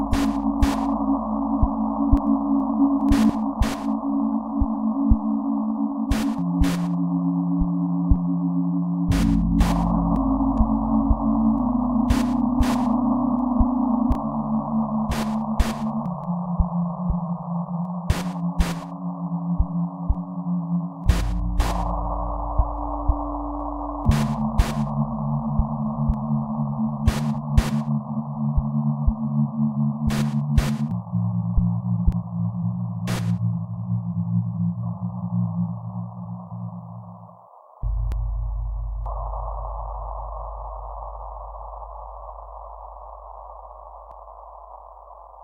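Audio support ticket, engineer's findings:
Overlap between stream segments: short skips at 2.17, 8.16, 14.15, 20.15, 26.14, 32.12, 38.12, 44.11 s. Every 6 s, at segment joins. Overlapping timestamps trimmed real audio. Waveform jumps.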